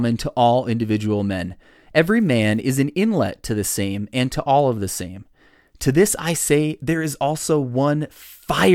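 Between "to all individual men" and "an inlet to the", 2.04 to 2.61 s, an unreliable data bit adds equal-sized spikes of about -36 dBFS, a steady crackle that, unlike clipping, continues regardless of loudness.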